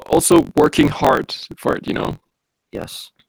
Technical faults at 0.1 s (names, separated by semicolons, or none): gain pumping; block size mismatch (truncated)